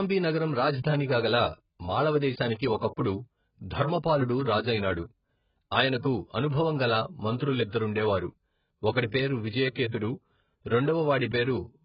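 Speech throughout shows heavy AAC compression damage, likely AAC-LC at a very low bitrate around 12 kbps: nothing above 5.1 kHz, with dull, smeared, warbling sibilants.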